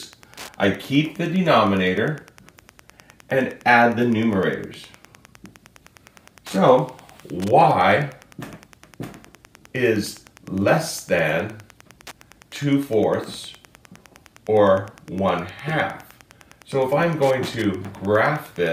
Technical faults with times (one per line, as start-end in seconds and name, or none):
0.00-18.73 Wi-Fi interference